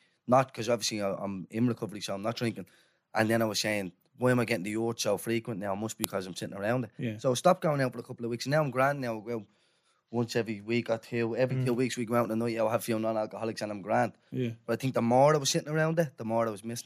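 At about 6.04 s there's a quick, sharp click in the speech, and it has the hallmarks of a file header played as audio. When separate WAV pieces get joined or streamed without stripping their headers, those few dozen bytes of metadata end up read as sample values. That's garbage as far as the waveform is concerned, so you get a brief snap at the seam between pieces, unrelated to whatever the talker is doing there.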